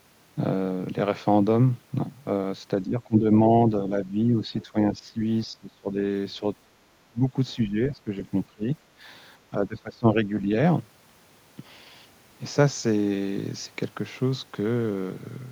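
Speech, with channel delay (comb filtering) from 0 to 10.86 s: one channel trails by roughly two samples, and the mono sum cancels at a first notch near 10 kHz, dulling the top end. The speech dips by up to roughly 20 dB at 2.83–5.98 s, 6.39–6.44 s, 7.09–8.67 s and 9.5–10.49 s, likely speech suppressed in double talk as the echo canceller mistook overlapping talk for echo. At 8.95–9.0 s the background drops by about 10 dB, gated by the echo canceller.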